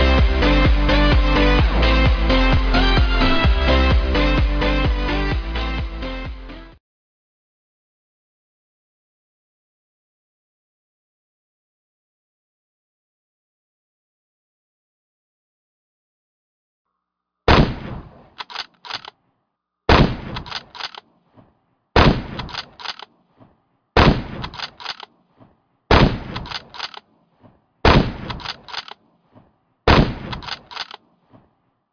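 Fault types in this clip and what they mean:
No faults can be heard.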